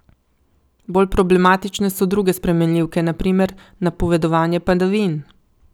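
Hard clipping affects this speech clip from about 1.00 to 1.50 s, just before "so druge spremenljivke na". For that half second the level exceeds what one stage in the chain can pass, by about 2 dB, so the waveform peaks are sliced flat. Those squared-off tops create added harmonics high in the spectrum, heard as a brief crackly roughness on the loudest parts of the speech.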